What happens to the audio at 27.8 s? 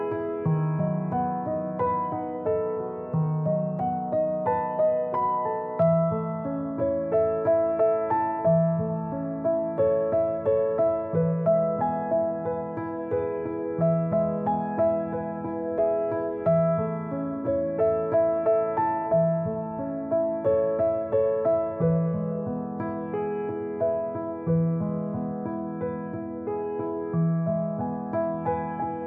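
Nothing goes wrong at 27.8 s: the audio plays through that moment intact, with no dropout, click, distortion or other fault.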